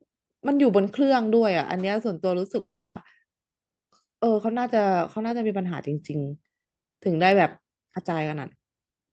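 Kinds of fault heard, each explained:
Long network dropout: from 2.59 to 2.97 s the speech breaks off for 360 ms, most likely because packets stopped arriving. The receiver stretches the last sound into a fading buzz, then leaves 270 ms of near silence before speech resumes with that stretch gone. A spectrogram shows the harmonics smearing into flat bands that fade to a dark gap, beneath the 8 kHz ceiling of the call codec. The waveform shrinks to a flat line.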